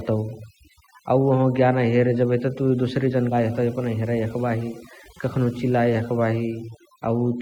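Overdone noise removal runs through the whole speech clip. The noise reduction was set far too strong. It pushes individual frequency bands down or shuts them off whenever they sit close to its noise estimate. Soft parts of the voice get caught and removed as well. The background drops and breaks up into twinkling specks.

At 3.31 s, right after "तुइ दोसरे", playback skips ahead. Roughly a fifth of a second of speech is gone. Nothing fills the hole, and the audio on either side is butted together almost directly. That points to audio dropped in transit or discarded by an overfull jitter buffer while later audio was already queued. You hear an abrupt jump forward, with the delay shortened by about the same amount.

From 3.4 s to 4.44 s a jitter buffer speed-up follows. The buffer was still holding more audio than its target. To catch up, the receiver cut out many short slices, each one or a few pitch periods long. 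About a tenth of a second disappears this way. Speech plays at 107% speed while the pitch stays unchanged. That stretch sounds slightly rushed.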